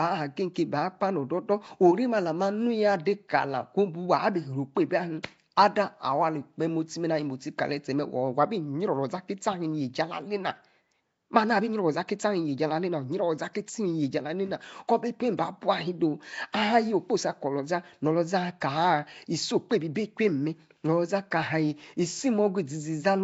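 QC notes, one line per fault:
throughout, Nellymoser compression: rough, hissy halo and smeared underwater tone with nothing above 7.7 kHz, likely Nellymoser Asao at a low bitrate near 32 kbps noise-filling weak bands.
5.23 s, pre-echo: a brief hiss about 10 ms long smears in just before a sharp attack, as block-wide quantisation noise spills into the preceding quiet.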